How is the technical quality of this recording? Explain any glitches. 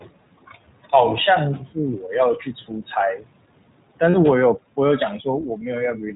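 Quality is limited by two processing stages on the speech, with three short glitches on top.

Noise suppressor artifacts run through the whole clip. The room noise sits about 17 dB below the speech. The suppressor pulls that noise down by about 21 dB between phrases and lets it back up under the speech. The background pumps.

The iLBC codec is also present throughout, and its damage is plainly audible. Nothing above 4 kHz gets through, so the speech sounds narrow. It is also slightly rough and synthetic. The texture fits a 15.2 kbps stream built from 20 ms frames.

Speech cut by the noise suppressor happens twice. From 3.17 to 3.26 s, part of the speech drops by up to about 18 dB. From 5.94 s to the end it drops by about 9 dB. The suppressor mistook speech for noise, so those sounds come out swallowed and faint.

Lost iLBC frames occur from 4.10 to 4.15 s, a 40 ms gap that fits two dropped frames. 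The decoder fills the hole by repeating the last pitch cycle mixed with noise. It sounds like a brief buzzy held vowel. The voice is right again almost at once afterward.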